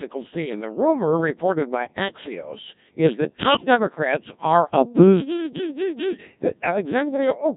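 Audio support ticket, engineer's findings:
Robotic, buzzy speech throughout, nothing above 3.8 kHz. Codec 2 vocoder, heavy damage. Voice rebuilt from sine waves, waveform lost. Fits a 1.6 kbit/s mode.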